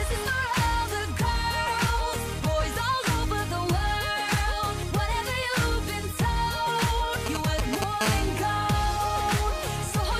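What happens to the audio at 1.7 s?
Nothing happens to the audio at 1.7 s; it plays through that moment intact, with no dropout, click or distortion.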